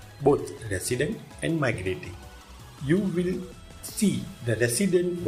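No technical faults can be heard in this clip.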